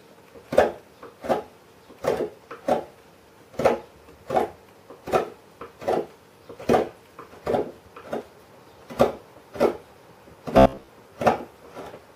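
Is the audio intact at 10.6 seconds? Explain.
No. From 10.58 to 10.88 s there is robotic sound from repeated short buffers. New audio likely arrived too slowly, so a segment of about 15 ms kept looping over most of that span while the real signal was skipped. The looping forces a rigid, metallic buzz at 66.8 Hz.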